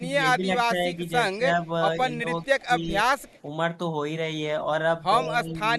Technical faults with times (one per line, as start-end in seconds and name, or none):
0.37-1.44 speech suppressed in double talk
2.13-2.26 speech suppressed in double talk
2.42-2.66 echo leak
2.67-3.05 speech suppressed in double talk
3.18-3.41 echo leak
5.19-5.59 speech suppressed in double talk
5.45-5.54 echo leak